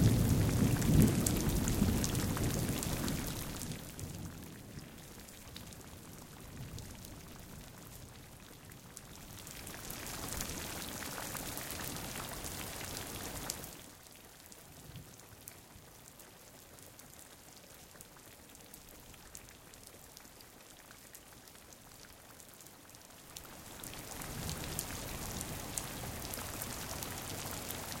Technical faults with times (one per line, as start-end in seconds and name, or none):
8.92-10.15 zipper noise
23.00-24.45 zipper noise